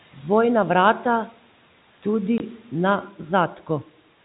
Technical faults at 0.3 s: none

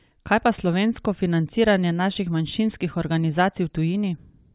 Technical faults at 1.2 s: none

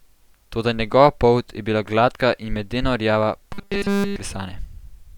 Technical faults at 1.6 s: none

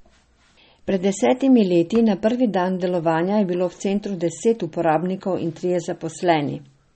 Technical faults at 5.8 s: MP3 compression

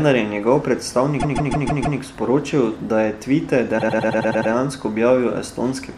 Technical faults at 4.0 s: repeated frames

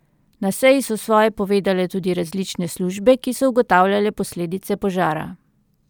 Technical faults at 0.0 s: none

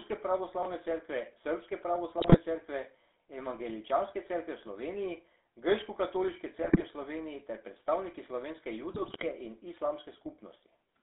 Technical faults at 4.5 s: GSM full-rate codec

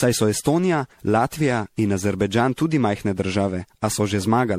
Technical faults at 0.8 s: generation loss

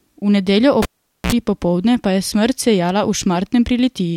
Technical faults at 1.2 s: cable pulled and plugged in

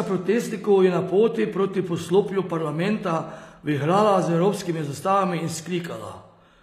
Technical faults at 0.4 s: HE-AAC compression

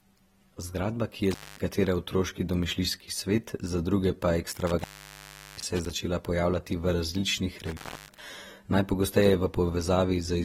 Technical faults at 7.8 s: AAC compression; intermittent contact

